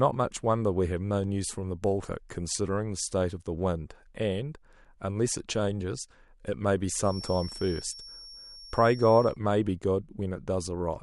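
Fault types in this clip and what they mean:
Feedback whistle: a thin, steady tone near 5.5 kHz sits well beneath the speech from 7.00 to 9.38 s, swelling and fading slowly in level. It is likely a loudspeaker-to-microphone loop held just at the edge of feedback, sustaining that one frequency without building up.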